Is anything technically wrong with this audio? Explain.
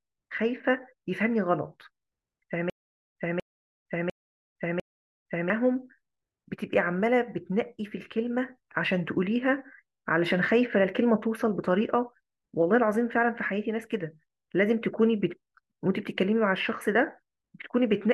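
Yes. From 2.70 to 5.50 s there is a stutter with silent gaps. A 240 ms burst of speech repeats four times, every 700 ms, with 460 ms of digital silence between. The player likely stalled, replaying its last fragment at each retry.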